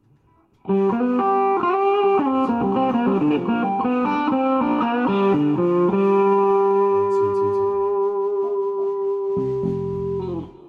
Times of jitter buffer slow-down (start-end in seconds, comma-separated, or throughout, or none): none